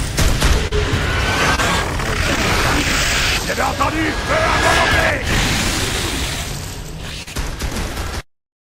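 Network packets carrying the audio arrived too late at 0.67, 1.55, 2.36 and 7.23 s, so the receiver concealed each gap. This short concealed packet loss is heard as brief smears or wobbles lasting a few hundredths of a second. From 5.17 to 5.37 s the processor missed several deadlines in a row, which fits buffers of around 5 ms. Stretches of old audio were replayed with hard edges, producing a burst of processor overload crackle.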